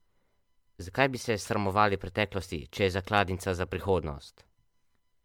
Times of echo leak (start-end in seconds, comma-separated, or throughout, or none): none